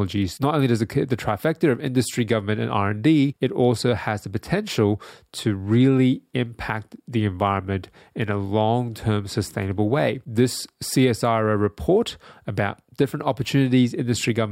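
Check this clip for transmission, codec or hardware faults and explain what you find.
There are clock slip clicks from 0.13 to 14.50 s. Faint ticks recur about every 50 ms, forming a soft rattle. Likely cause: unsynchronised clocks a few hundred ppm apart, each slip dropping or repeating one sample.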